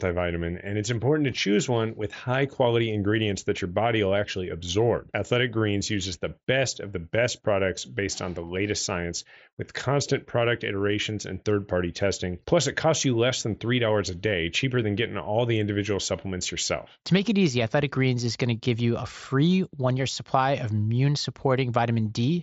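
Speech, with no technical faults to report. It comes through a Bluetooth mSBC headset codec, so the sound stops around 8 kHz, loud moments carry a light grainy texture, and the faintest upper bands drop in and out.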